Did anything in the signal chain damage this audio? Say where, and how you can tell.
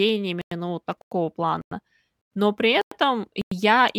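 Yes, a gap between chunks at the playback stage: 100 ms silences at 0.41, 1.01, 1.61, 2.21, 2.81 and 3.41 s interrupt the speech between 0.5 s chunks.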